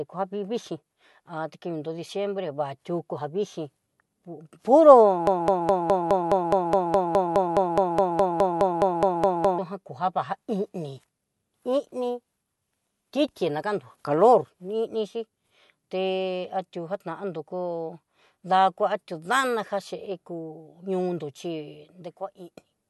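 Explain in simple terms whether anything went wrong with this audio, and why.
From 5.27 to 9.58 s the speech hits a broken-record loop: a 0.21 s snippet repeats 21 times, likely a stalled player, and the real audio there is lost.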